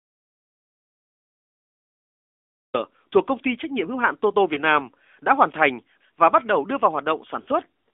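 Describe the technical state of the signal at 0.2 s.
At 0.2 s the signal is in an audio dropout to silence that is already under way when the clip begins and lasts until about 2.74 s, where speech returns with "thuộc công ty trách". The input was likely lost, for example through a disconnected device or a failed link, while silence kept being written. The gap is silent with no room tone at all. On a waveform it shows as a flat line, and on a spectrogram as an empty, black band across every frequency.

The same moment also sits under the AMR narrowband mobile codec that covers the whole clip. It is masked during the silence but plainly audible once speech resumes. This narrowband mobile speech coder models the voice as a vocal-tract filter excited by a few pulses per subframe, and its level of damage is consistent with a mid-range rate of around 10 kbps. The voice sounds buzzy and synthetic, and the line band runs only from 250 Hz to 3.5 kHz. 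On a spectrogram the speech sits in that strip, with nothing above and a thin floor below.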